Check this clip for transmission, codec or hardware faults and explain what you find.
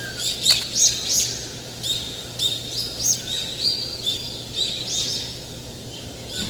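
Two faults are audible: codec damage throughout, and one short burst of contact noise near the start.

Opus compression, throughout: tones sound grainy and rough, likely from Opus music-mode coding at a low rate around 16 kbps. Band energy is kept but detail is filled with noise, which shows as smeared, speckled texture on a spectrogram extending to 20.1 kHz.

Cable scratch noise, 0.44 to 0.63 s: a dense, uneven scratching, nearly as loud as the sound, likely from a worn contact. It appears as jagged spikes on the waveform and broadband vertical streaks on a spectrogram.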